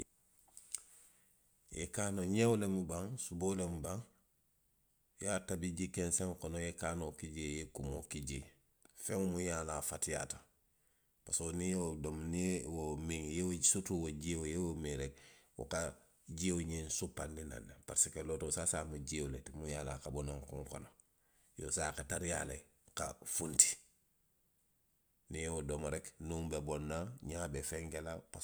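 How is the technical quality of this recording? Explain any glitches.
No glitches can be heard anywhere in this recording. The speech runs without any audible technical fault from beginning to end.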